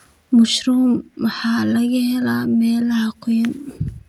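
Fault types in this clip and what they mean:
No faults can be heard anywhere in this recording. Nothing in it points to a problem in how the sound was captured or carried.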